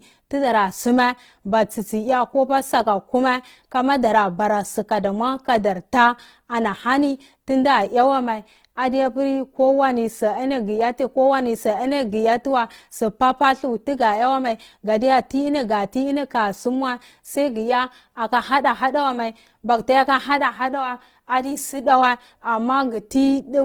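A speech recording that sounds rough and grainy for its whole length, with a noisy, sandy texture on the voice where the tonal parts should be smooth. There is little of the swirling, hollow quality of MP3; instead the detail sounds filled in with hiss, while the top end stays open to about 20.2 kHz. The likely cause is Opus compression in its music-oriented CELT mode, at a rate that fits roughly 16 kbps.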